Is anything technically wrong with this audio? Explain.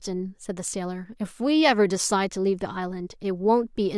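No, nothing technically wrong can be heard in this speech recording. There is no audible defect to point to at any moment in it.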